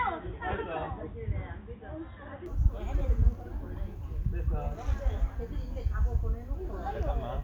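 Input switched to a poorer device, from 0.0 to 2.46 s: the opening stretch is band-limited, with nothing above 3.8 kHz, so it sounds dull and boxy. It sits roughly 10 dB quieter, and a faint background noise lies well below the signal. At 2.46 s the full bandwidth and level return abruptly, with no gap. This is likely the recording path starting on a lower-grade microphone or headset input before switching to the main one.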